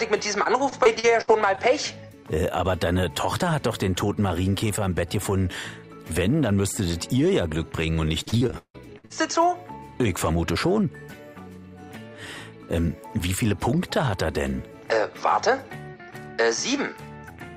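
From 0.43 to 1.59 s the sound turns choppy, with several short dropouts, the longest about 63 ms. Between 8.23 and 9.12 s it gets worse: nearly half that stretch is patched over, and one hole lasts about 159 ms, giving a choppy, stuttering texture. Both are repeated packet loss. Packets went missing in quick succession, and each gap was filled by extending the last sound before the next gap arrived.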